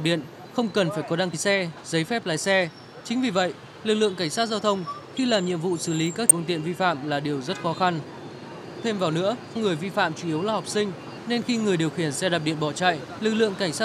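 The audio carries four brief bursts of damaged data in a compressed stream, at about 1.33, 6.30, 9.55 and 13.17 s, each heard as a short chirp, squawk, click or hole. Corrupted bytes make the decoder misread the affected frames and lose sync until it finds the next frame header. On a spectrogram each shows as a thin vertical smear of broadband or oddly banded energy; the waveform shows a short, jagged discontinuity.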